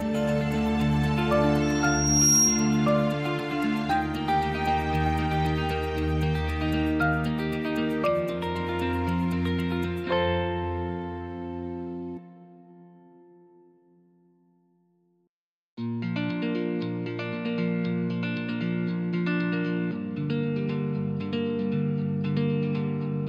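A piercing, steady whistle at about 5.6 kHz rises out of the audio at 1.62 s, swelling over roughly the first 0.7 s until it sits a few decibels above the rest of the sound, then stops at 2.92 s. This is loudspeaker feedback squeal. A microphone picked up the loudspeaker it was driving, and at 5.6 kHz the loop gain exceeded one, so that single frequency reinforced itself on each pass.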